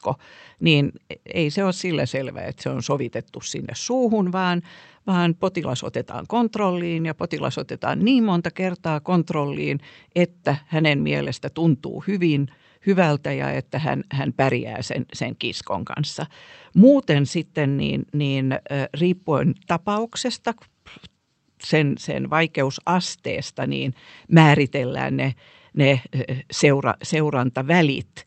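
No technical faults are audible in the speech; it has come through a call codec and jitter buffer working as designed, with the top of the spectrum rolled off above about 8 kHz, as expected for Opus at that bandwidth setting.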